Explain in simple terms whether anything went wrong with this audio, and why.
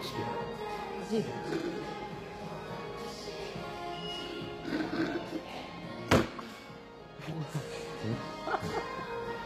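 Throughout, the treble sounds bright but gritty and metallic, with nothing above 15.5 kHz, likely from HE-AAC compression rebuilding the top end rather than simply muffling it.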